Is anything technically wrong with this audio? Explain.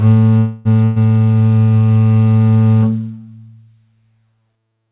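Yes, there are two faults early in this music clip, both heard through a narrowband call path where nothing above 4 kHz survives.

From 0.38 to 0.73 s there's a call audio freeze. The music stalls and the last sound is stretched into a fading buzz for about 270 ms before it picks up exactly where it left off, so nothing is lost but everything after it shifts later. The likely cause is delayed packets draining the jitter buffer, with the receiver filling the wait until they turn up.

Then from 0.84 to 0.99 s there's a burst of packet loss. Again the last sound is held and faded for roughly 120 ms, but this time, when the music returns, it has jumped ahead. About 120 ms of the music is simply gone, because those packets never arrived in time and the receiver had nothing to do but cover the hole and move on.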